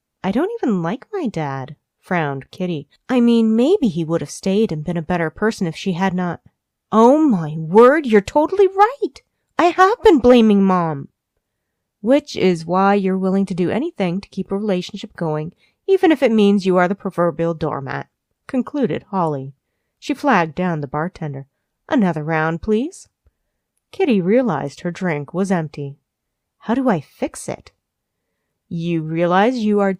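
Clock drift between sender and receiver runs throughout: the sender's clock is roughly 1.5% slow, so the receiver's buffer keeps draining and must be topped up.

Repeated timing corrections from 0.50 to 29.68 s repeat short pieces at uneven intervals, adding roughly 0.4 s at about 99% speed, heard as faint hiccups.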